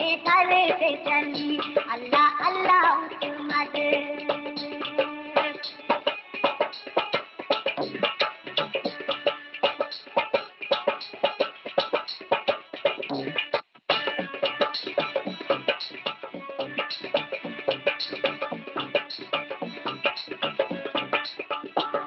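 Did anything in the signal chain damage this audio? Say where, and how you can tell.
No, the signal chain left no damage in this audio: it arrives intact through the WebRTC call path, whose codec limits the top end to about 8 kHz as a normal part of its coding.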